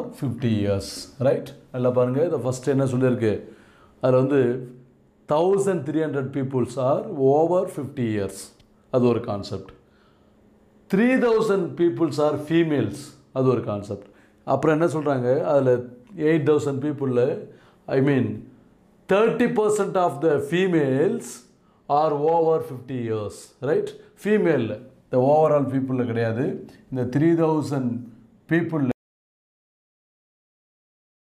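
At 28.92 s the sound cuts off abruptly and never returns. This is an audio dropout to silence. The last 2.42 s are silent, with no room tone at all. The input was likely lost, perhaps through a disconnected device, while recording continued.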